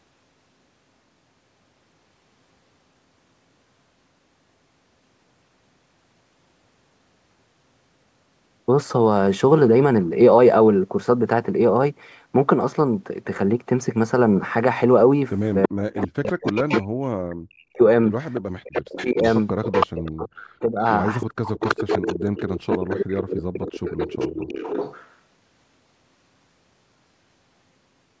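Speech here, and the back half from about 15.6 s onward gets messy. There's an echo leak: a delayed copy of the talker comes back roughly a third of a second (329 ms) late, from 15.63 to 16.83 s, 18.35 to 20.11 s and 21.2 to 25.15 s. It sits around 10 dB under the direct speech, except the middle stretch, which is louder at only about 5 dB down. That's likely a far end on speakerphone whose echo canceller didn't fully scrub what its mic picked up and sent it back. Overlapping that, there's speech suppressed in double talk: the talker's level dives by as much as around 40 dB from 15.68 to 17.81 s, 18.6 to 19.18 s and 20.11 to 23.54 s. It drops out in chunks adding up to about a second and a half, half a second and three seconds. It's likely the kind of ducking a canceller does when both sides talk at once and it can't tell its own talker from the echo, so it pulls both down. The top end stops at 8 kHz, which is just the call's mic chain doing its normal thing.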